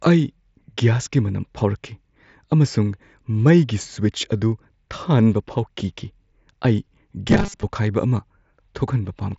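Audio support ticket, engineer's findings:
Robotic sound from repeated short buffers, 7.28 to 7.63 s. Rigid metallic buzz at 200 Hz, loosely following the speech contour. Buzz pitch points to a 5 ms segment looped. Roughly half the audio in that span is repeats, with real audio skipped. Likely cause: input starved and the receive buffer filling gaps by replaying its last chunk. Carried over a Bluetooth mSBC headset link; band tops out near 7.7 kHz with light grain on louder passages.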